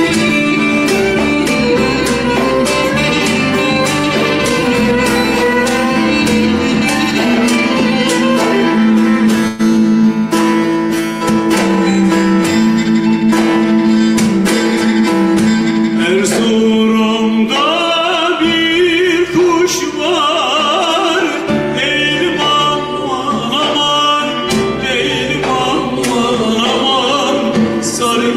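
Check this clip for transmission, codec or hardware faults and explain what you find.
Two transmission faults are present: a brief call audio freeze and a short jitter buffer speed-up.

From 9.47 to 9.61 s the audio stalls into a fading buzz or hiss for about 118 ms, then resumes exactly where it stopped, with nothing lost. The likely cause is delayed packets draining the jitter buffer, with the receiver extending the last sound. On a spectrogram this shows as smeared, decaying harmonics with no new onsets.

From 13.23 to 14.00 s a jitter buffer speed-up plays the audio at 109% of normal speed with unchanged pitch, making it sound hurried. The receiver trimmed roughly 70 ms of excess buffered audio by cutting short pitch-period pieces. The waveform looks compressed in time, with tiny splice points.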